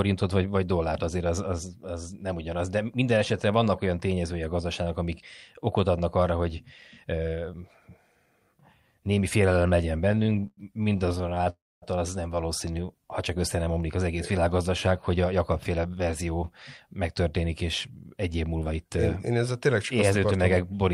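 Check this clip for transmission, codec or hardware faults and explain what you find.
Three network-timing faults turn up in the speech between about 10 and 16 s.

Repeated stalls (stutter), 10.09 to 11.48 s: packets arrived late again and again, so the jitter buffer kept running dry and the receiver stretched the last sound to fill 28 short gaps, the longest 104 ms. About 420 ms is concealed, roughly 30 percent of the span, so the speech drags and judders. On a spectrogram, harmonics smear into flat, repeated horizontal bands. The waveform shows chopped, repetitive stretches.

Call audio freeze, 11.50 to 11.84 s: the sound halts for 322 ms. A brief continuation of the last sound fades into about 240 ms of silence, then speech resumes where it stopped with nothing lost. The cause is likely packets held up in transit. The spectrogram shows a fading smear, then a blank column. The waveform is flat there.

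Jitter buffer speed-up, 14.68 to 16.07 s: after the backlog, the receiver trimmed many pitch-period slices, roughly 150 ms in total, to cut delay. Speech runs at about 109 percent speed at unchanged pitch and sounds hurried. Syllables appear compressed in time on both displays, with harmonic spacing unchanged.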